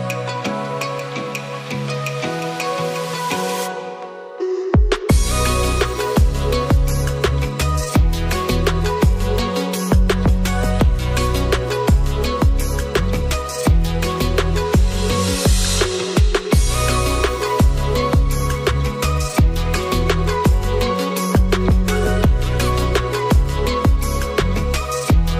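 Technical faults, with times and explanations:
No technical faults can be heard in this clip.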